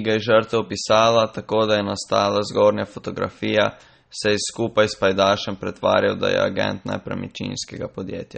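Throughout the speech, the sound is watery and swirly, with plainly audible damage and a dulled top end: nothing reaches above 8.4 kHz. This is likely MP3 compression, at a bit budget that fits roughly 32 kbps. Starved of bits, the encoder cut the treble at a fixed point and dropped weak frequency lines that flicker from frame to frame. A spectrogram shows a hard ceiling at 8.4 kHz and patchy, blocky holes beneath it.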